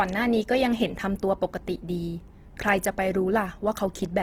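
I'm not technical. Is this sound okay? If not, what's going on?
No. Throughout the clip, the speech has a rough, grainy, noisy quality, likely from Opus compression. Squeezed into very little data, the encoder keeps each frequency range's overall loudness but patches in noise or copied texture where detail should be.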